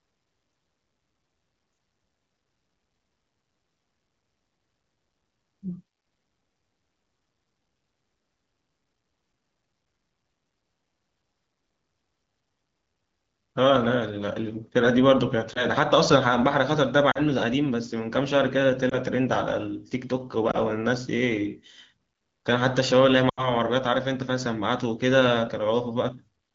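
Brief dips and warbles at 15.53 to 15.66 s, 17.11 to 17.19 s, 18.89 to 18.95 s and 20.52 to 20.58 s, then a longer drop to near silence from 23.29 to 23.50 s, are lost AMR speech frames. Damaged frames were discarded, and the wideband decoder stretched its last good pitch and vocal-tract settings at falling gain. The single dips fit one missing 20 ms frame, 17.11 s fits about 40 ms lost, and 23.29 s fits roughly 80 ms.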